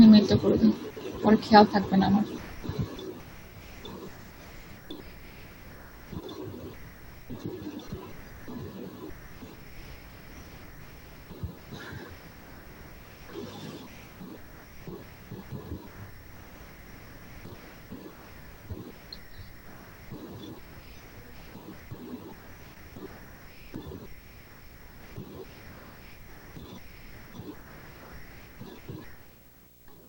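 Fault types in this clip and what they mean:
Video or display buzz: throughout the clip, a screen or video cable is leaking into the audio path, giving a buzz at the 59.94 Hz picture field rate with hash above it and a whine at the 15.7 kHz line rate, sitting roughly 25 dB under the sound.
Short concealed packet loss: from 22.74 to 22.77 s, about 20 ms of audio arrived too late to decode, and the receiver papered over roughly 13 ms of it by extending the preceding sound before crossfading back, heard as a brief smear or wobble.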